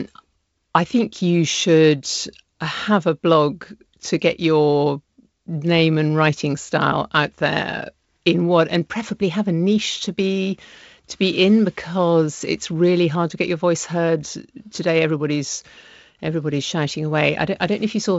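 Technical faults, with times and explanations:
No technical faults; the speech band stops at about 7.7 kHz, as expected from G.722 wideband telephone coding.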